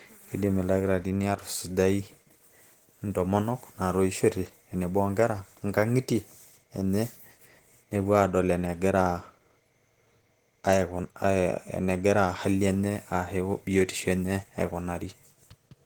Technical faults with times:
0.00-15.86 Opus compression

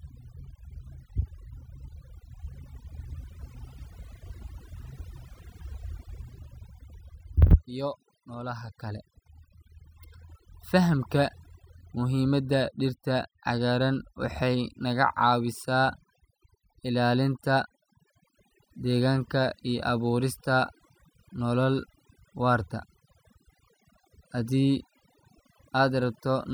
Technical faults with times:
0.00-26.53 overdone noise removal

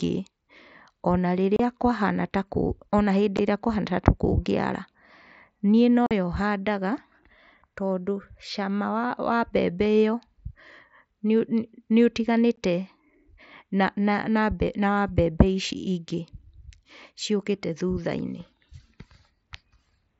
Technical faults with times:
1.56-1.60 unconcealed Bluetooth headset packet loss
3.37 unconcealed Bluetooth headset packet loss
6.06-6.11 unconcealed Bluetooth headset packet loss
12.56 unconcealed Bluetooth headset packet loss

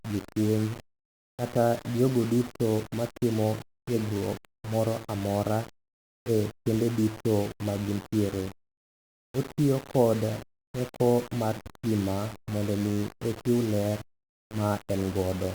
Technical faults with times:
0.00-15.54 low bit depth without dither

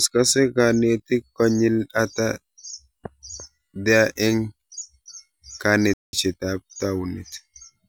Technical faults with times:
5.93-6.13 playback stall

